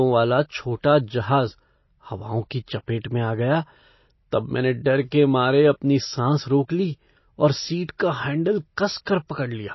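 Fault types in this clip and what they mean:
MP3 compression: watery, swirly speech from likely low-bitrate MP3 coding; a spectrogram shows nothing above 5.8 kHz and weak components flickering on and off.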